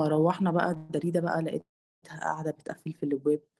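At 0.77 s the speech halts for about 128 ms, filled by a brief fading buzz of the last sound, then resumes exactly where it left off. A longer call audio freeze follows from 1.61 to 2.04 s: after a short tail the gap goes silent for roughly 370 ms. The likely cause is delayed packets draining the jitter buffer. Unlike a dropout, nothing is lost; the speech is simply pushed later.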